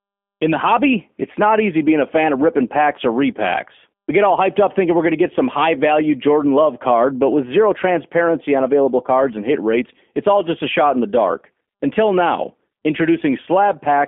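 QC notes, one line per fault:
Throughout: G.729 codec damage, plainly audible across the speech. The line band runs from about 200 Hz to 3.4 kHz, so the sound is thin and boxy, with no low body and no air on top. The codec does not send the waveform. It sends a vocal tract filter, a pitch predictor and a few pulses per frame, and the decoder rebuilds the speech from those. That leaves a rough, slightly synthetic buzz on voiced sounds, which fits a low bitrate of around 8 kbit/s.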